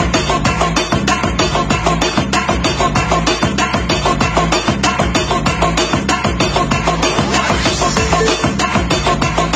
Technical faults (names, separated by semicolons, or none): gain pumping